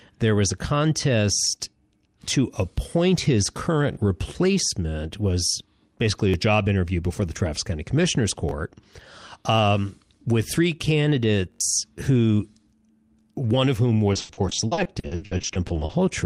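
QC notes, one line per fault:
3.93–3.97 s, repeated buffer: after "contest to appoint his", a 21 ms chunk, which fits a 1024-sample buffer, plays twice more. The waveform shows identical copies with hard joins, heard as a stutter.
6.29–6.34 s, repeated buffer: after "replacement was basically", the same 21 ms chunk repeats twice. Vertical click lines mark each join on the spectrogram, and about 40 ms of new audio is lost.
8.49–8.51 s, repeated buffer: a single 21 ms block replays once, giving a brief click. One vertical line appears on the spectrogram, with a copied waveform segment.
11.52–11.61 s, repeated buffer: four extra plays of one 21 ms block cause a buzz at about 47 Hz. The spectrogram shows evenly spaced stripes, and roughly 100 ms of audio is lost.
14.13–15.95 s, repeated packet loss (robotic sound): after "one of whom", 22 holes up to 80 ms long are filled by stretching the preceding sound, covering 38% of the span. 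The result sounds choppy. On the spectrogram, smeared flat harmonic bands break up the normal formant movement.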